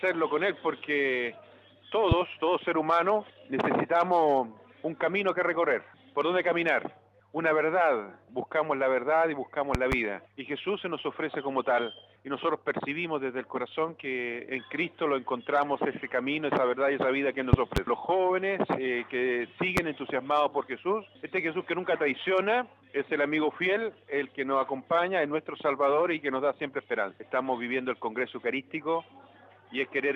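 A loud pop hits at 2.12 to 2.15 s, about 15 dB above the sound. Double pops follow at 9.75 to 9.95 s and 17.53 to 17.80 s, then a single pop at 19.77 to 19.80 s. These later pops peak around 20 dB above the sound. Each is a sharp thump laid over the audio, which carries on underneath. The likely cause is a sudden voltage step, from a switch, a plug, static or a driver glitch.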